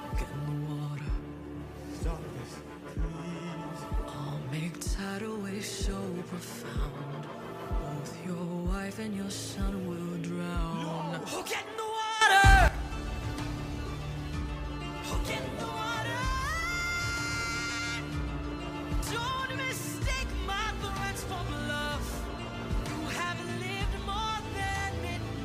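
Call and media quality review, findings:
Sudden gain jump, 12.21 to 12.68 s: digital gain likely stepped with no ramp, from a setting change or bit shift. Level rises about 12 dB between adjacent samples, sound and background noise together, then returns at 12.68 s.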